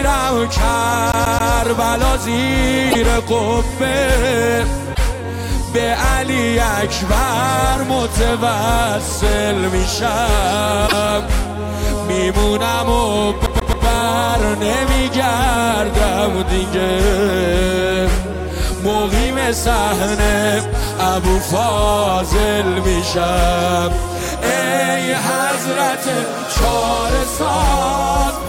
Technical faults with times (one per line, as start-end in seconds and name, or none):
1.12-1.52 CD stuck on one turn
2.90-2.95 broken MP3 bit reservoir
4.93-4.99 broken MP3 bit reservoir
10.86-10.93 broken MP3 bit reservoir
13.46-13.86 CD stuck on one turn